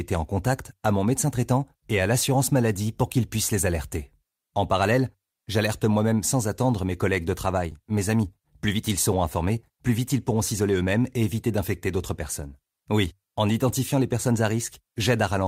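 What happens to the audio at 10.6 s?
At 10.6 s the speech is inside a jitter buffer speed-up running from 7.82 to 10.84 s. Short pitch-period chunks are cut to drain excess buffering, so the speech plays about 109% fast at unchanged pitch and sounds hurried. On a spectrogram the harmonics stay at the same height while syllables are compressed in time, and the waveform shows cycles spliced together.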